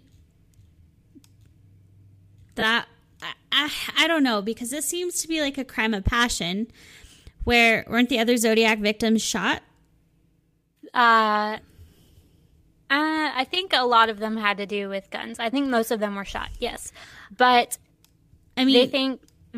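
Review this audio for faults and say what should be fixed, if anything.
Lost LE Audio frames occur from 2.60 to 2.63 s, just before "I I I don't". For about 22.5 ms the speech gives way to a brief grainy smear. That span fits three 7.5 ms frames dropped over the Bluetooth link. The decoder filled the gap by repeating the last received spectrum with randomised signs. On a spectrogram the harmonic striations blur into an even, noise-like patch. On the waveform the periodic cycles become a short stretch of irregular signal. Improving link robustness, through a shorter distance, less radio interference or retransmission headroom, would prevent these drops.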